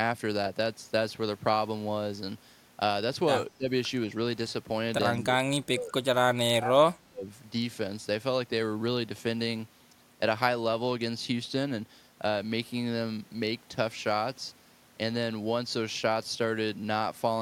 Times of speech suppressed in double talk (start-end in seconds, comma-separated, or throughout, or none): 3.50-3.70, 5.17-5.95, 6.31-7.28